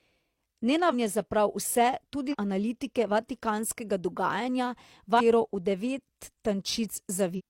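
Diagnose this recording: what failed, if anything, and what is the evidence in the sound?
The fault is at the codec stage: damaged data in a compressed stream. Three short disruptions cut through the speech at 2.28 to 2.35 s, 5.16 to 5.21 s and 7.34 to 7.41 s, each only 50 to 70 ms long. Corrupted bytes make the decoder misread frames and lose sync until it finds the next valid header, which produces these brief disruptions. A network dropout or buffer underrun gives a clean gap or smoothed concealment instead.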